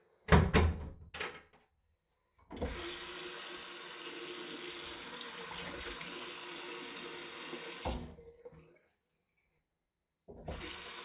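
No technical faults can be heard anywhere in this recording of sounds.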